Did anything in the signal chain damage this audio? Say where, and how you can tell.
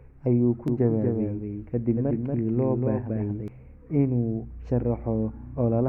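Yes. A doubled audio track, likely from a second, slower capture path or an edit holding two out-of-step copies. From 0.68 s to 3.48 s, just after "ayuu ku", an undecayed full-band copy trails the speech by about a fifth of a second, roughly 5 dB down, starting and stopping abruptly.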